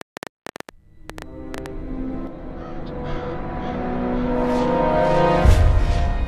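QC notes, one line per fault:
0.01–1.67 s, train of clicks: a burst of sharp ticking and popping sits on top of the sound from the very start, roughly fifteen clicks at about 8.5 per second, spaced unevenly and peaking around 10 dB above the surrounding audio. Each click has much the same shape, so they read as one repeated pulse rather than random crackle. The likely cause is electrical interference from nearby equipment or a faulty connection or power supply injecting the pulses.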